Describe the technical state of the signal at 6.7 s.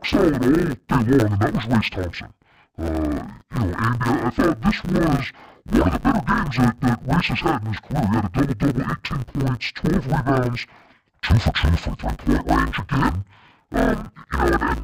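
At 6.7 s, as throughout, interleaved audio is read as planar: each 10 ms block's alternating samples are split into halves, giving dull, robotic speech buzzing at 100 Hz.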